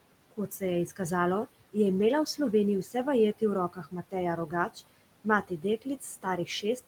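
Right from the start you get noise suppressor artifacts running the whole way through. The suppressor is pulling the steady background down by about 18 dB, frame by frame and band by band, so the room noise, which sits roughly 18 dB under the speech, drops away in the gaps and creeps back up underneath the talking.

It also bites into the speech itself. Between 0.31 and 0.62 s, just before "je izkazalo je imela", speech gets cut by the noise suppressor: it mistakes quiet speech energy for noise and turns it down by up to about 16 dB, so a short stretch, maybe a tenth of a second in total, sounds swallowed. The same thing happens from 3.69 to 4.14 s, dipping about 14 dB, and again from 5.43 to 6.03 s at about 16 dB. In each of those two, something like a fifth of a second of soft sound goes faint and muffled.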